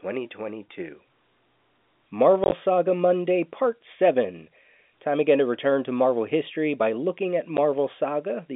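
From 2.44 to 2.52 s the speech is punched through by several short holes of silence, about 50 ms in all, the longest 20 ms. This is packet loss filled with silence: the receiver played nothing where packets failed to arrive. The hole lengths fit 10 ms packets. At 7.57 s, just after "history by looking at", a single 10 ms gap falls. Unlike a concealed loss or a fade, each gap begins and ends abruptly, over the narrow telephone band.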